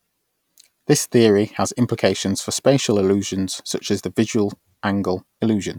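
A short stretch of speech, and honestly there's nothing technically wrong to point to anywhere in it.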